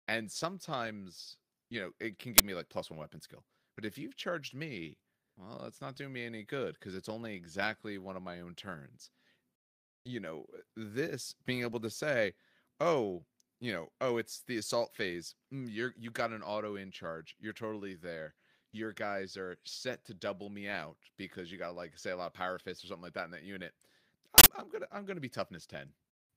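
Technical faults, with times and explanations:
2.38–2.40 s and 24.38–24.46 s, uninitialised buffer: two brief bursts of loud digital noise cut into the speech, the first between "you know it can" and "me like plus one", the second just before "I'm gonna I'm gonna". Playback reached an output block before any audio had been written into it, so stale memory contents were sent out as samples. The 20 ms and 80 ms lengths point to whole blocks of garbage data.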